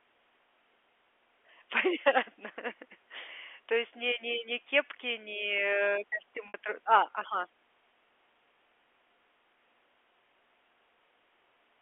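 At 6.48 to 6.54 s, between "ни ни кепки ни" and "тро а ага", packet loss with pitch repetition removes about 60 ms, which fits two lost packets. The receiver loops the last pitch period, giving a brief buzzy held tone. On a waveform this shows as identical repeated cycles, and on a spectrogram as frozen, flat harmonics within the G.711 telephone band.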